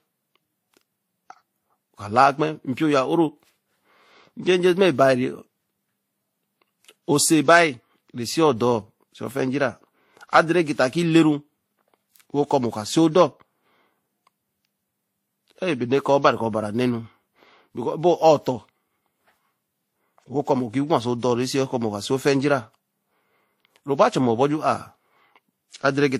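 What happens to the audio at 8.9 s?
At 8.9 s the speech has the same layered quality heard across the whole clip: the artefacts of two codecs heard together, with nothing above 15.8 kHz. The cause is likely transcoding between lossy codecs. The sound points to a first pass through a WMA encoder at around 64 kbit/s, then Vorbis at around 44 kbit/s. The second encoder spent its smaller budget re-encoding the first one's artefacts while adding its own, so both kinds of damage sit together, and the lower cut-off from the chain stays.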